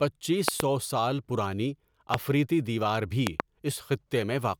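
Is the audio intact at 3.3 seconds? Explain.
No. From 3.27 to 3.42 s a loud pop, heard as two sharp pops in quick succession, sits roughly 25 dB above the speech, which continues underneath. The likely cause is a sudden voltage step or pulse, such as a switch or static discharge, entering the signal chain.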